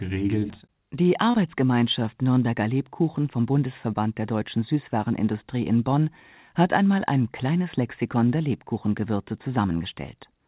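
At 1.31 to 1.37 s there's a short concealed packet loss: about 30 ms went missing, and the receiver stretched the preceding speech across the gap, leaving a brief smear.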